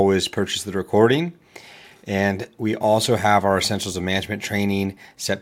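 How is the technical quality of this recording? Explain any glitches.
Nothing stood out as a technical problem on listening to this recording.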